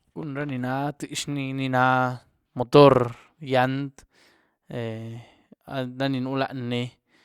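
No faults detected anywhere in the speech recording.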